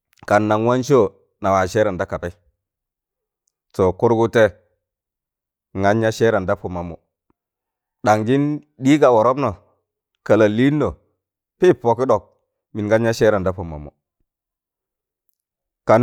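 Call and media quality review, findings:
No faults found; the speech signal holds steady level and continuity throughout, with no audible disruption anywhere along the call path.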